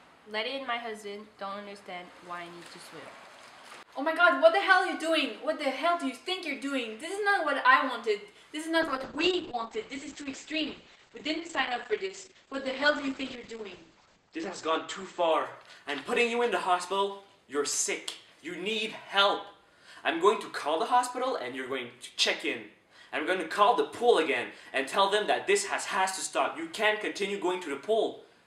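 From 8.83 to 17.11 s, a call bitrate drop makes the audio rough and muffled, cut off above 8 kHz. This fits roughly 96 falling to 9 kbps.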